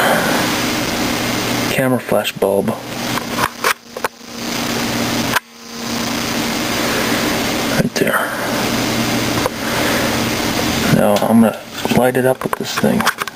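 Gain pumping runs through the whole clip, most likely from input gain set far too high with a fast limiter clamping down on every loud sound. The level swings by about 25 dB, leaving everything squashed.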